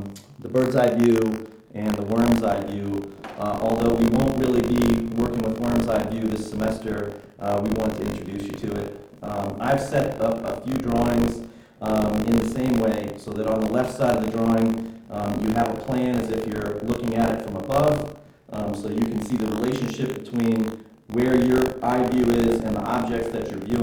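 Buffer tearing runs through the whole clip, heard as a steady robotic buzz at 50 Hz that sits on the audio wherever there is signal. The writer and the hardware reading the ring buffer have drifted out of step and cross inside each period, which fits a period of about 20 ms. In every period a small slice, about 7 percent, is stale audio from roughly 40 ms earlier, hard-spliced on both sides.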